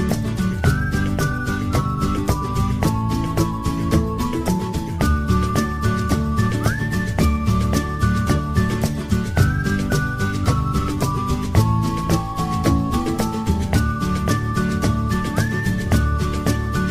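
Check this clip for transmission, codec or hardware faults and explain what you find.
No transmission, codec or hardware faults.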